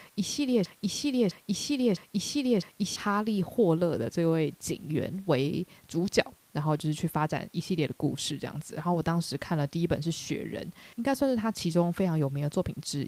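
A speech recording with a broken-record loop from 0.66 s to 2.96 s. A fragment about 0.66 s long repeats exactly, four times back to back. The speech due in that span never plays. The likely cause is a stalled player or stream resending its last buffer. Faint room noise sits about 36 dB below the speech.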